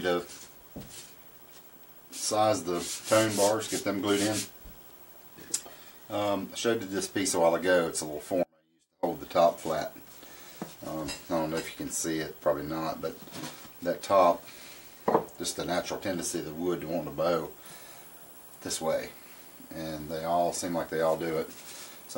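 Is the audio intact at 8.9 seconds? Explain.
No. At 8.9 seconds the audio sits inside an audio dropout to a faint residue, running from 8.43 to 9.03 s. The signal cuts out abruptly for about 0.59 s, leaving only a faint leak roughly 40 dB down, likely because the source was lost while the downstream path stayed live.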